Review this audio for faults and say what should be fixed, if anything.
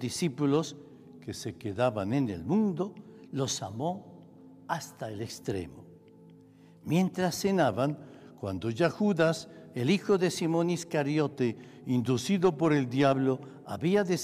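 Three drift correction steps occur: 0.92–2.13 s, 7.69–9.74 s and 11.32–13.13 s. Each time the sound slows by about 6% and drops about 110 cents, then snaps back. Likely cause: clock-matching software jumping its rate. Prevention: smooth, gradual rate adjustment.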